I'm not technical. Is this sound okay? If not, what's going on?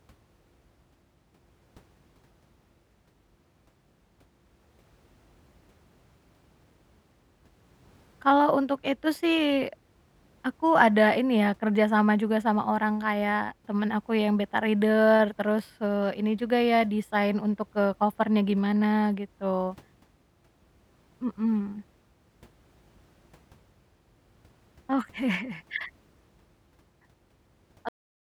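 No. The speech has a cut-off end. At 27.89 seconds the sound stops mid-sound instead of fading out. The final stretch of audio was never recorded or played back. The last 0.44 seconds is dead silence with no natural tail.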